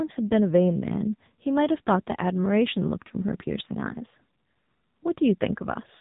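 Speech throughout has been squeezed through the AMR narrowband mobile codec at a low bitrate, and the heavy damage fits a mode around 6.7 kbps. Its sparse pulse-driven vocal-tract model makes the voice buzzy and synthetic, and nothing above 3.8 kHz survives.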